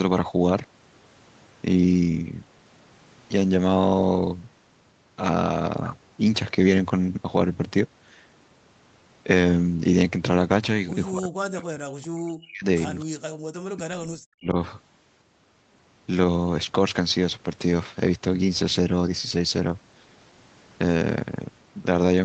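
Speech heard through a call path band-limited to 8 kHz, with echo-canceller trouble in the middle. From 11.11 to 12.65 s and again from 13.69 to 14.56 s the voice dips by as much as roughly 40 dB, most likely speech suppressed in double talk as the canceller ducks the talker along with the far-end echo. At 12.99 to 13.05 s a faint echo leak comes through, a delayed copy about 245 ms behind and roughly 30 dB below the speech, likely residual loudspeaker echo the canceller missed. At 13.33 to 13.41 s the room sound drops out by about 40 dB for a moment, background gated by the echo canceller before it releases.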